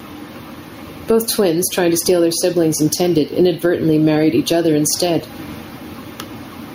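Gain pumping runs through the whole speech clip: the gain swings by around 15 dB, ducking as each loud syllable arrives. The likely cause is a mic gain set far too high with a fast limiter clamping it. Unlike a noise gate, which silences the gaps, this squashes loud and soft parts closer together in level.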